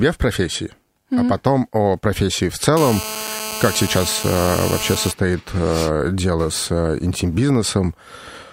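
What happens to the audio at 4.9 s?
At 4.9 s a GSM phone buzz sits under the speech. It runs from 2.77 s, just after "потом о профессии в", to 5.12 s, before "а дело с а". A nearby 2G phone on a call pulses its transmitter 217 times a second. The audio circuitry rectifies those radio bursts into sound. The result is a hard, raspy, harmonic-rich buzz at 217 Hz. It holds steady, about 8 dB below the speech, and ignores what is being said.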